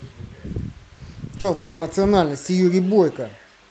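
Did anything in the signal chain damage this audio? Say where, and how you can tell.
Yes. The damage happened at the network stage, as short concealed packet loss at 1.37–1.39 s and 1.40–1.45 s. The decoder bridged gaps of 10 ms and 40 ms by extending the preceding sound, heard as a brief smear. On a spectrogram the harmonics run unnaturally flat, then blend back.

From 1.54 to 1.82 s there was likely a long network dropout. The receiver filled all 270 ms by continuing the last sound as a fading buzz or hiss, with no true silence, and the speech resumes with that stretch missing. The waveform shows a smoothly decaying envelope, and the spectrogram shows smeared, featureless bands.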